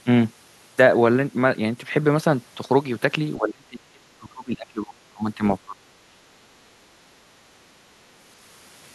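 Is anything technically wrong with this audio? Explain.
Yes. The speech drops out in two stretches, from 3.37 to 5.43 s and from 5.65 to 6.21 s, sinking by roughly 30 dB and then around 25 dB. This is likely speech suppressed in double talk, with an echo canceller mistaking overlapping near-end speech for loudspeaker echo and attenuating it.

There is also background gated by the echo canceller, at 6.49 to 6.6 s and 7.38 to 8.01 s. The canceller clamps the microphone while far-end audio plays, so the room sound dips by about 7 dB and about 8 dB, then recovers once it releases.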